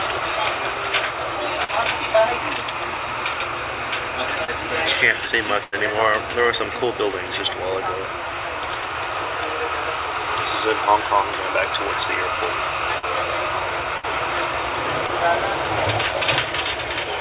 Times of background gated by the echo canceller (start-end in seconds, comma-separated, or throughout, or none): none